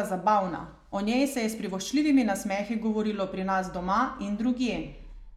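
No technical faults can be heard anywhere in this speech recording.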